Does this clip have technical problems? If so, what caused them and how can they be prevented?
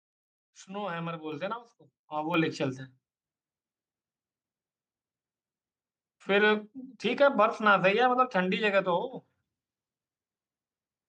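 Yes. Microphone volume stepped up at 1.32 s and again at 2.34 s: the capture software judged the input too quiet and raised the device gain in single jumps of about 7 dB, then about 5 dB, lifting speech and background together. Prevent it by disabling automatic microphone gain adjustment in the call software.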